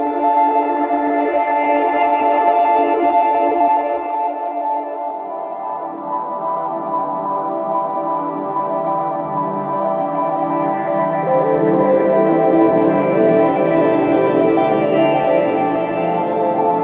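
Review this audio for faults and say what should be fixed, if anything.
Nothing here needs fixing; the audio came over a call path that leaves nothing above 4 kHz, which fits G.711 A-law telephone coding at 64 kbps, and that narrow top end is simply how such a line sounds.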